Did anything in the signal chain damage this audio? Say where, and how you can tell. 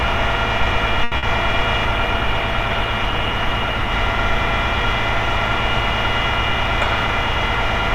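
Yes. A short stall from a late packet occurs at the network and jitter-buffer stage, from 1.04 to 1.14 s. A packet arrived about 80 ms late, so the buffer ran dry and the receiver stretched the last sound over that time. Nothing is lost, but the sound hangs unnaturally before resuming from the same point.

A burst of packet loss follows from 1.18 to 1.25 s, also on the network side. Consecutive packets never arrived in time, so the receiver concealed about 50 ms by extending and fading the preceding sound, then jumped ahead. Roughly 60 ms of audio is simply missing.

A call bitrate drop at the codec stage runs from 1.86 to 3.99 s. The bandwidth estimate collapsed and the encoder fell from 128 to 28 kbps, staying near the bottom for about 2.06 s. Opus codes more coarsely at that rate, so the sound turns rough and duller until the bitrate recovers.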